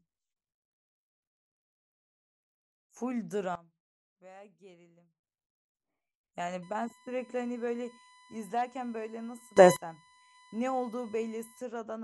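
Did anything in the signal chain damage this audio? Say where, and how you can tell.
Yes. From 3.55 to 5.24 s the speech and its background noise drop together by about 18 dB, instantly and with no fade, then return just as abruptly. A second sudden gain jump, from 9.57 to 9.76 s, throws everything up by about 24 dB for a fifth of a second. Because the noise floor moves in lockstep with the speech, this is a digital gain change in the driver or processing stage, likely a level setting applied in one step without a ramp.

From 6.63 to 11.62 s a steady, fixed-pitch tone at 1 kHz sits under the speech, roughly 25 dB below it, and does not follow the talker at all. This is USB whine, entering through the analogue wiring: the bus draws current in bursts every millisecond, and that 1 kHz pulse rate leaks through shared power or ground into the audio path.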